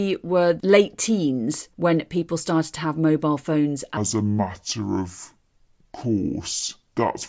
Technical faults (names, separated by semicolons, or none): wrong sample rate